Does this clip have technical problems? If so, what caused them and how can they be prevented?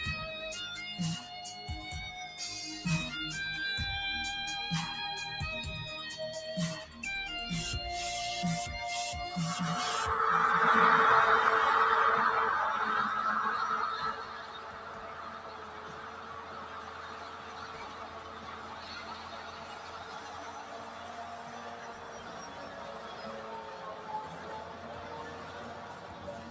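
Yes. A noise suppressor made for speech was left on for the whole clip. It treats sustained tones, ambience and decays as noise, so the level swings by about 15 dB as attacks pass and held sound is pulled down. On a waveform, the envelope pumps. On a spectrogram, sustained bands flicker and tails end abruptly. To prevent it, switch off noise suppression or use a music mode when sending anything other than speech.

Sound cut by the noise suppressor runs from 14.13 s to the end at 26.50 s. The suppressor mistook this stretch for noise and cut it by up to about 9 dB, thinning sustained and fading parts while sharp onsets survived. A spectrogram shows faded, patchy energy between the transients, and the waveform shows a lower, uneven envelope. Disabling the suppressor for non-speech material avoids this loss. Nothing appears above 8 kHz, which fits the call's normal microphone path.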